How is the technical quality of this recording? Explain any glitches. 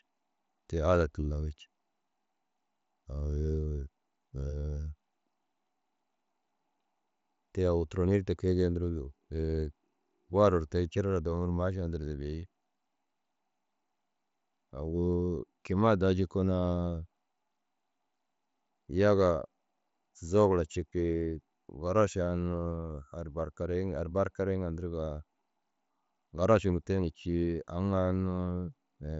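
Nothing stood out as a glitch on listening to this speech recording, which comes over a Bluetooth mSBC headset link with the audio band ending at about 7.7 kHz, as that link allows.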